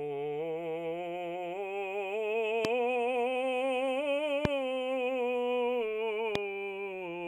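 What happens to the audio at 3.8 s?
Nothing goes wrong at 3.8 s: the music plays straight through that moment with no dropout, click, glitch or other fault.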